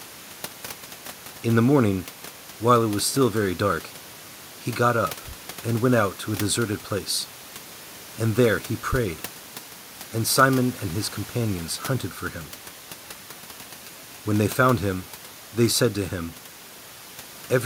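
No technical faults are present.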